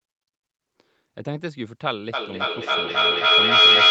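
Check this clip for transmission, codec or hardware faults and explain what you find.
There's one real fault: a feedback howl that takes over from 2.13 s and runs right to the end of the clip. From there, a tone around 3 kHz builds instead of dying away, pulsing roughly every third of a second, and peaks at about 16 dB above the speech. That's two devices in the same room on one call, each picking up the other's loudspeaker. Every trip around the loop comes back a bit louder, and the loop keeps favouring that one high band until it's basically a single screaming pitch. The top end stops around 8 kHz, which fits a wideband call codec.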